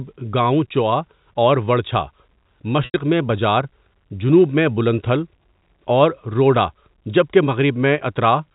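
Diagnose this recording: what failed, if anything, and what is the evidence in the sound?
Network stage: packet loss with pitch repetition from 2.85 to 2.94 s. About 90 ms went missing, which fits three 30 ms packets. The receiver looped the last pitch period, so a brief buzzy hold fades out. A hard dropout would go silent, and a buffer glitch would replay a longer chunk.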